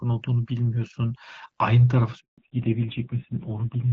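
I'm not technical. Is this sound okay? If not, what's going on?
No, not quite. At 2.20 s there's a handover gap: the call switched networks and the voice drops out completely for about 0.18 s, until 2.38 s. Right after that comes a fallback to narrowband. The call leaves the clearer HD Voice quality, loses everything above 4 kHz, and the voice sounds duller and rougher through to the end.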